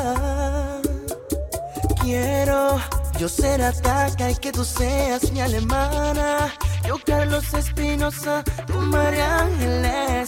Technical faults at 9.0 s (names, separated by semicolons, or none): none